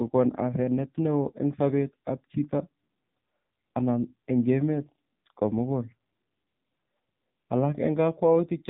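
From start to finish the speech passes through an AMR narrowband mobile codec, with nothing above 3.8 kHz. Unlike a plain telephone band-limit, which only muffles, this sounds buzzy and synthetic, its heavy damage fitting a low AMR-NB mode near 6.7 kbps.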